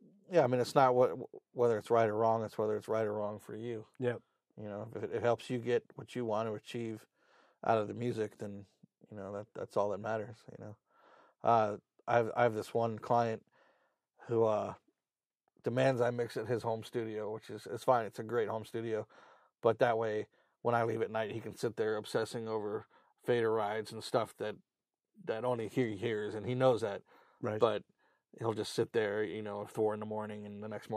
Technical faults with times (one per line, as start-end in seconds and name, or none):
none